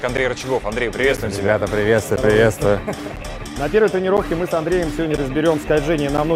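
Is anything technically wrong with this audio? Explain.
Yes. There are periodic USB or driver dropouts from 0.17 s to 6.18 s. They recur once every 1.0 s, about seven times in all. Each time, roughly 10 ms of audio is lost and replaced by silence. Something on the system stalls the USB bus or audio driver on a fixed schedule. The stream briefly starves. The result is a steady tick or small pop each second, audible wherever the sound is present.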